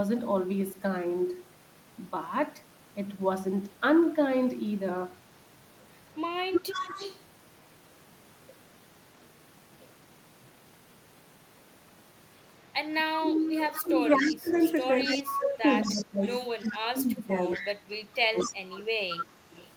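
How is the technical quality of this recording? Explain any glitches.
The recording has two related faults, both pointing to a speakerphone call with imperfect echo cancellation.

Echo leak at 6.52–7.23 s, 13.17–16.74 s, 17.44–18.54 s and 19.12–19.67 s: a copy of the speech trails by about 228 ms. It is about 5 dB down at first and about 10 dB down later. It is likely loudspeaker pickup that the echo canceller failed to remove.

Speech suppressed in double talk at 13.18–14.5 s and 15.05–18.81 s: the talker's speech dips by up to roughly 20 dB, in pieces totalling about one and two seconds. The likely cause is the canceller turning everything down while it hears both sides at once.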